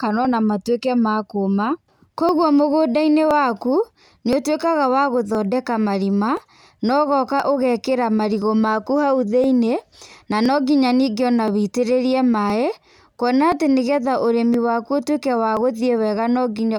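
Periodic USB or driver dropouts: every 1.02 s from 0.25 to 16.59 s, about a millisecond of speech is skipped, leaving regular ticks.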